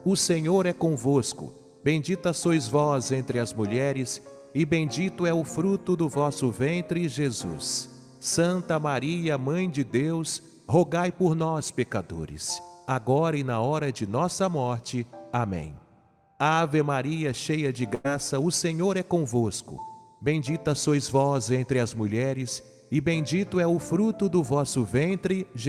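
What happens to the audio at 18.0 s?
Right around there you hit a burst of packet loss, from about 17.95 to 18.06 s. A run of packets never arrived in time, so the receiver stretched the last bit of sound for roughly 95 ms while fading it down, then jumped ahead with about 100 ms missing.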